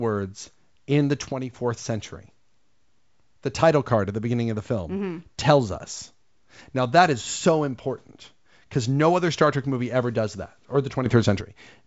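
Speech with two sudden gain jumps, at 1.32–1.53 s (down about 7 dB) and 11.06–11.41 s (up about 10 dB). The background noise shifts instantly with the speech, with no fade-like ramp. This is likely an unramped digital gain change.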